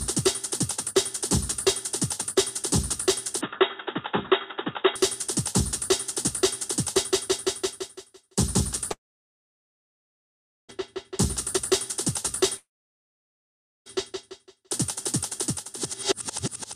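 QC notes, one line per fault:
3.41–4.96 s, input switched to a poorer device: the sound abruptly narrows to nothing above 3.7 kHz and takes on a boxier tone with a new background noise about 40 dB under the signal. The level stays roughly the same and there is no gap at either transition. The likely cause is a change of input to a lesser microphone or headset profile. Unlike a plain filter or EQ change, the different noise floor and colour show another device entirely, and full bandwidth returns at 4.96 s.
8.91–10.71 s and 12.57–13.88 s, long network dropout: about 1.78 s and then 1.3 s of audio are missing. Each begins with a brief concealment buzz, around 50–70 ms of the last sound smeared and fading, followed by near-silence for roughly 1.72 s and 1.22 s. The likely cause is the stream stalling. Unlike short packet-loss glitches, these gaps last over a second, and the sound resumes further along rather than picking up where it stopped, so the missing stretch is lost.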